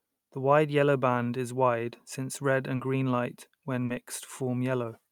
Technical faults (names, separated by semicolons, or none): short concealed packet loss